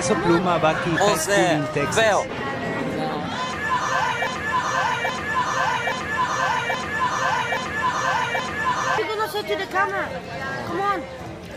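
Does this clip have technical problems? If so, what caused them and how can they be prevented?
Yes. From 4.27 to 8.98 s there is a broken-record loop: a 0.83 s piece repeats exactly, back to back, six times, likely because a stalled player, encoder or stream kept resending its last fragment, and the audio for that span is lost. On a spectrogram or waveform this shows as identical blocks tiling the span. Prevent it with stall detection that mutes or resyncs rather than replaying stale buffers.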